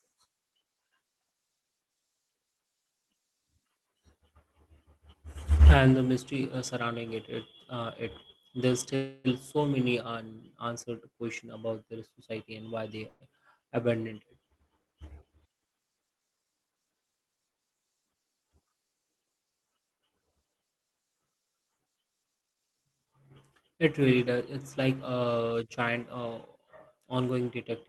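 At 8.95 to 9.27 s, after "uh it there's", and at 13.08 to 13.24 s, after "their society and why", the speech stalls into a fading buzzy hold before resuming with "so many unanswered questions" and "abandoned it". This is a call audio freeze, likely from delayed packets draining the jitter buffer. On a spectrogram, smeared horizontal streaks replace the speech detail, and the waveform shows a decaying tail.

From 15.93 to 16.87 s and from 22.39 to 23.71 s, a jitter buffer speed-up trims repeated pitch-period slices, running the speech about 11% and then 21% fast at unchanged pitch. It sounds hurried. The waveform looks compressed in time, with spectrogram harmonics still at the same frequencies.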